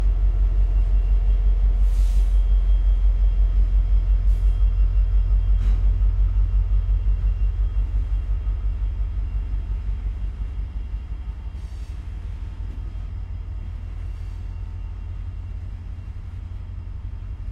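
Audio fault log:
No technical faults can be heard anywhere in this recording of sounds; the signal path gives no audible sign of trouble.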